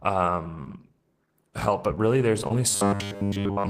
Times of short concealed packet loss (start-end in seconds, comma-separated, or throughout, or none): 0.64-0.67, 2.41-2.51